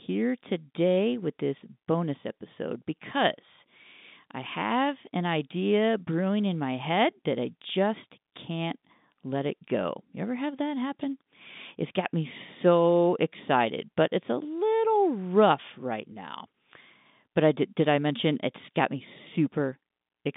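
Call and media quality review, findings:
No faults found in this speech recording. The G.711 telephone coding path is audible as a band running from about 150 Hz to 3.7 kHz, with at most a faint quantisation noise that follows the signal level.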